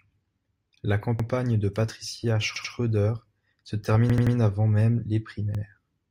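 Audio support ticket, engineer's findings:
Repeated buffer in speech, four stutters: 1.20 s (one extra play), 2.56 s (two), 4.10 s just before "avant même les" (three), 5.55 s just after "avant même les" (one). Each repeated piece is 85 ms with a hard join, which fits a 4096-sample buffer. The output device replayed its last buffer because new audio arrived late. No audio is lost afterwards, so the speech is delayed rather than cut. Probable component: playback buffer feed.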